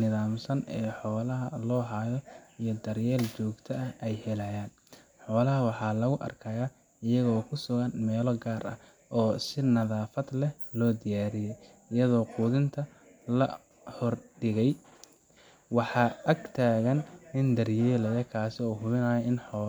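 No technical faults can be heard anywhere in the speech recording, and the signal stays steady and intact throughout.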